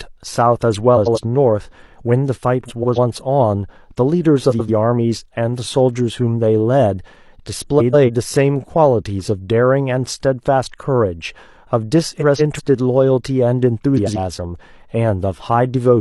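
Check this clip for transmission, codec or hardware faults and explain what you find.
The speech has one recurring fault: frames out of order, at 0.97–1.18 s, 2.66–2.98 s, 4.50–4.70 s, 7.79–8.10 s, 12.18–12.60 s and 13.97–14.18 s. In each, two adjacent blocks of about 93 ms, 139 ms or 186 ms were decoded swapped, so the stretch flutters garbled, but no time is lost.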